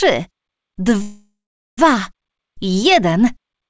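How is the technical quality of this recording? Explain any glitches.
A call audio freeze from 1.02 s to 1.79 s interrupts the recording. The most likely cause is late packets draining the jitter buffer, so the receiver stretched the last sound into a fading fill lasting about 0.76 s, including roughly 0.43 s of silence. When audio returns, it resumes where it stopped with nothing lost, but everything afterwards arrives about 0.76 s later. The call path itself shows no content above 8 kHz, which fits a wideband codec such as G.722.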